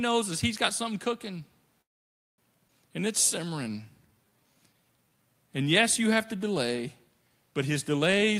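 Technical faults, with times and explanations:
1.81–2.40 s, call audio freeze: Right after "he's got something cooking" the sound stops for about 0.57 s. There is only a brief trailing continuation of the last sound before it drops to near silence for about 0.55 s. The likely cause is packets held up in transit so that the jitter buffer ran dry. The audio then resumes where it left off, with nothing lost. On a waveform this shows as a flat gap. On a spectrogram it is a blank vertical band.
2.68–2.71 s, skip ahead: Playback jumps forward with almost no gap, only a few milliseconds of join. Roughly a third of a second of speech is gone. That stretch was discarded, in transit or from an overfull buffer, while later audio was already queued, so the two sides are spliced almost directly. The waveform shows an abrupt change in envelope at the splice. The spectrogram shows harmonics and formants that break off and restart mid-pattern with no transition.
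3.45–5.35 s, jitter buffer slow-down: For nearly two seconds the speech runs at about 86% speed with pitch unchanged. The receiver stretched it by about 0.27 s, repeating single pitch periods and slivers of pauses to rebuild a reserve. Vowels and pauses sound drawn out. On a spectrogram, harmonic bands keep their spacing but segments are elongated. The waveform shows runs of near-identical repeated cycles.
8.09–8.39 s, jitter buffer speed-up: After "to delay but his" the final fraction of a second runs at about 127% speed, still at the same pitch. The buffer was holding more audio than its target, so the receiver cut out short pieces of one or a few pitch periods in quick succession, about a tenth of a second in total. This makes the ending sound hurried. Spectrogram segments look compressed in time with normal harmonic spacing, and the waveform shows small discontinuities at each cut.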